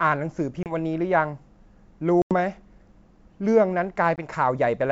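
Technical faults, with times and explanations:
0.63–0.74 s, 2.22–2.34 s and 4.16–4.26 s, packet loss on an ADPCM call: gaps of 30, 90 and 20 ms drop abruptly to silence, appearing as flat-line holes with vertical edges, then speech resumes briefly distorted while the receiver's predictor and step size resynchronise.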